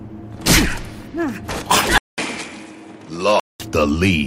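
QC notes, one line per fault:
1.98–3.60 s, input switched to a poorer device: 200 ms gap, then nothing above 11.4 kHz plus faint new hiss at the same level, likely another mic.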